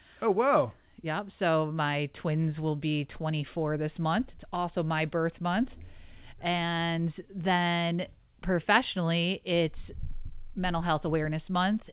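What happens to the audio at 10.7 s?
Nothing goes wrong at 10.7 s: the audio runs on without a dropout, click or glitch, still carrying the telephone-band character of the call path, with its G.711 mu-law coding, roughly 64 kbps, and nothing above 4 kHz.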